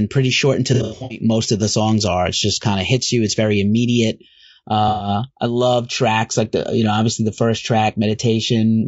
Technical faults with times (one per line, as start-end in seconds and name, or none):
0.00-8.88 low-delay AAC compression
0.74-1.21 AAC frame loss with concealment
4.88-5.08 AAC frame loss with concealment